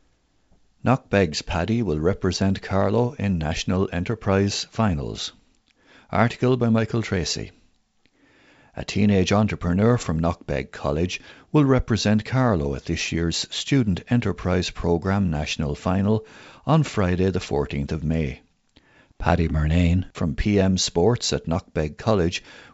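No technical faults can be heard anywhere in the recording. The speech carries the wideband G.722 telephone character, with content reaching up to about 7 kHz and, at most, a faint hiss in the upper band, which fits the full 64 kbit/s mode.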